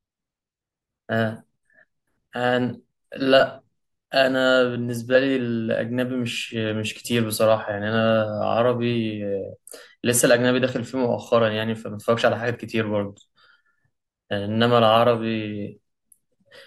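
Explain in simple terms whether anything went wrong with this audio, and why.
Nothing went wrong with this speech recording: the signal stays steady and intact throughout, with no technical faults to be heard.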